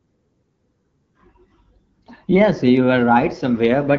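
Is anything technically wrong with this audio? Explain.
Yes, there's an AMR rate drop right at the end, from about 3.5 s to the close. The AMR-WB HD Voice link sounds clean at what fits 12.65 kbit/s, then the network forces a lower rate to protect against a weak radio link, likely around 8.85 kbit/s. Same bandwidth, no gap, but the speech turns rougher and more synthetic.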